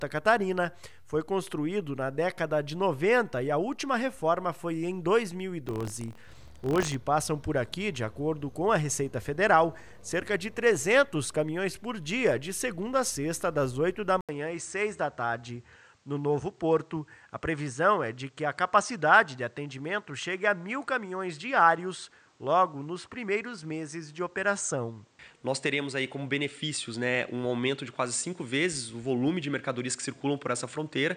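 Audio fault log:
5.64–6.95 s, buffer tearing: The writer filling the ring buffer and the hardware reading it slipped out of step, so their positions cross inside every period. A small slice of each buffer, a few percent, still holds sound from roughly 70 ms earlier, butted against current material with hard joins on both sides. Those joins repeat at 43.1 Hz, which fits a 1024-sample buffer, and produce a steady robotic buzz that rides on the signal and stops when the fault clears.
14.21–31.16 s, input switched to a poorer device: The recording drops out for 80 ms and then carries on with a narrower band and a different tone, most likely because the system changed its input to another microphone or a headset's call profile. The narrower band makes the sound turn dull and boxy from that point to the end. A new background noise sits roughly 40 dB below the signal, and the loudness stays about the same.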